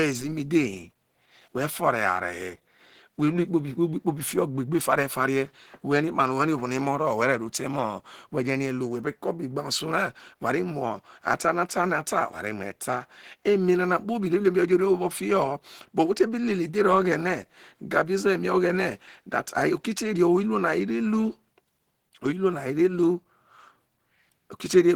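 From start to end, the speech sounds hoarse, muffled and grainy, likely from Opus compression in its hybrid mode at a low bitrate, consistent with about 16 kbps. A spectrogram shows energy up to 20.2 kHz, but the upper bands look noise-filled and smeared.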